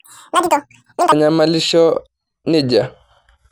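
From the start to 1.12 s, the audio is played back at twice the rate it was captured, with no conversion between the two. This is a wrong sample rate fault, and the doubling fits material recorded at 24 kHz being clocked out at 48 kHz. Because speed and pitch are tied together here, the speech runs at 2x speed and sits a full octave, 12 semitones, too high, giving a rushed, chipmunk-like quality.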